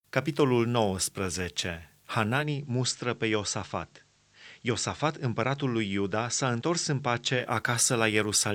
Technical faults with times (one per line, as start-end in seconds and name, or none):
2.35-7.50 digital radio blending to analogue